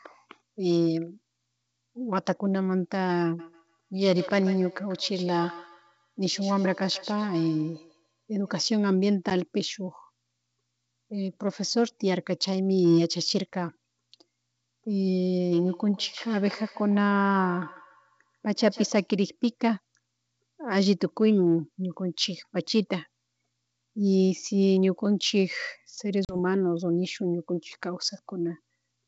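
From 3.39 to 8.71 s and again from 15.52 to 19.12 s, a feedback echo between two devices brings the speech back about every 150 ms, at about 18 dB below it, thinner each pass. That fixed repeat interval sets it apart from room reverberation. At 9.30 s, a roughly 10 ms gap from ADPCM packet loss cuts a hard-edged hole, likely one lost packet. The speech returns slightly distorted as the decoder's predictor resynchronises. From 26.25 to 26.36 s, a longer 40 ms loss of a few packets does the same.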